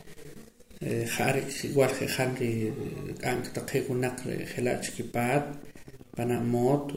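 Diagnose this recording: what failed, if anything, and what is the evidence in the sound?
A train of clicks runs from 1.98 s to 6.90 s. The ticks arrive about 8 times per second at a regular pace, some forty in all, peaking roughly as loud as the speech. The likely cause is interference in the analogue wiring injecting similar pulses.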